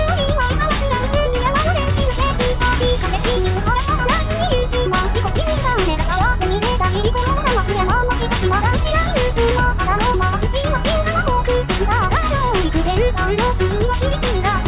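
Nothing is technically wrong with this clip.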